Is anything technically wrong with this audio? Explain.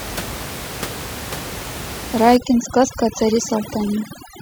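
Yes. From 2.37 s to the end at 4.42 s, the background collapses into near silence scattered with twinkling specks. This is overdone noise removal: the reducer, set too aggressively against room noise sitting about 12 dB below the speech, suppresses individual frequency bands near its noise estimate, taking quieter speech components with them.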